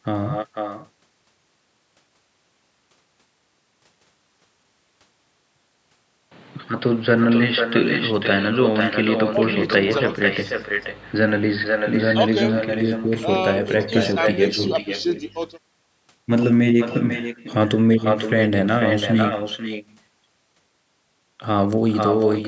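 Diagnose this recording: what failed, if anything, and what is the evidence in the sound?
Two things went wrong, both on the call path. The first is echo with no canceller. Across the whole recording the speech is shadowed by a thinner copy arriving roughly half a second later, at only about 6 dB below the direct voice. That points to the far end playing the call through a loudspeaker, its microphone picking it up, and nothing in the call processing subtracting it before it came back over the network.

The second is most likely the input switched to a poorer device, from 6.32 s to 12.70 s. There's no gap at either switch. The sound just goes dull and boxy, narrower in band than the rest of the clip, which reaches 8 kHz, the normal limit of the call microphone processing. The level shifts by around 5 dB, and a new noise floor appears roughly 30 dB under the speech. At 12.70 s it all clears again, as if the input moved to a narrower-band microphone and then back.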